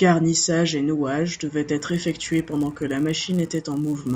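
A speech clip, and from 1.77 s, right after "et nouage devaient", through to the end it picks up a rough 100 Hz buzz riding on the signal. That's a resampler restarted on every block: each 10 ms chunk gets converted on its own, probably a 16 kHz to 48 kHz step, so the filter never sees the real neighbouring samples at the edges. Every block boundary leaves a small tick, and at 100 per second those ticks fuse into a buzz that only shows up while there's sound.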